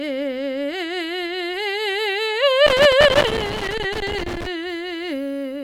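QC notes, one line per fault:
2.67–4.47 s, loose connector crackle. For just under two seconds the music breaks into an irregular burst of crackle and scratching. A worn or dirty contact somewhere in the chain is shifting and making and breaking rapidly. Each break chops the signal off for an instant, so the music stutters underneath. Any DC sitting on the line jumps at each make or break, adding sharp pops. The crackle is uneven because the contact moves unpredictably.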